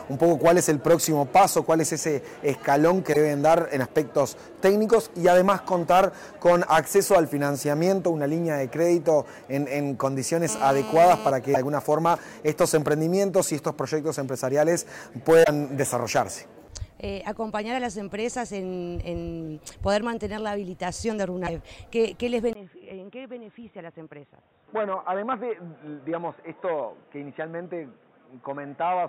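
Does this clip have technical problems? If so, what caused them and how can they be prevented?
Yes. Missing data in the MP3 stream likely broke the bit reservoir: frames following a cut looked back for borrowed bits and decoded the wrong bytes. At 3.12–3.17, 11.53–11.57, 15.43–15.48 and 21.46–21.49 s the audio jumps ahead with a brief garbled blip, 30 to 56 ms long, in a stream of 26 ms frames. Prevent it by transferring and storing files with error checking, and by cutting MP3s only with frame-aware tools.

GSM phone buzz runs from 10.49 to 11.31 s. A nearby 2G phone on a call sent radio bursts that the audio circuitry rectified, adding a steady, raspy 217 Hz buzz with many harmonics at about 12 dB below the signal. Prevent it by keeping phones off or well away from microphones, cables and interfaces.

The input likely switched to a poorer device at 22.53 s. After a 20 ms silence, the sound drops roughly 10 dB, loses everything above 3.8 kHz and turns dull and boxy for the rest of the clip, with a new noise floor about 35 dB under the signal. 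Prevent it by locking the recording input so the system cannot change devices mid-session.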